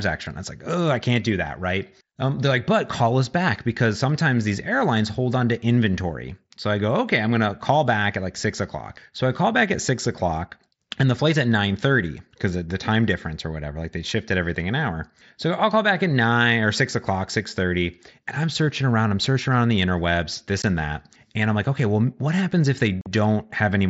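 At 20.62 s, after "around the interwebs this", and from 23.01 to 23.06 s, after "well what happens if", unconcealed Bluetooth headset packet loss cuts abrupt holes into the mSBC-coded speech.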